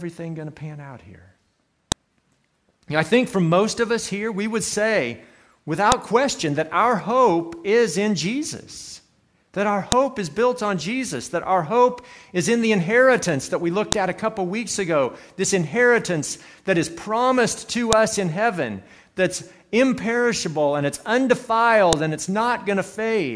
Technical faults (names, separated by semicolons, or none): file header played as audio